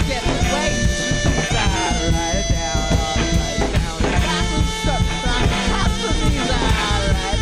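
At 1.86 s one lost LE Audio frame, about 10 ms, is concealed by the decoder reusing the previous spectrum with random signs. The music briefly turns into a noisy smear rather than the hard click or silent gap of an unconcealed dropout.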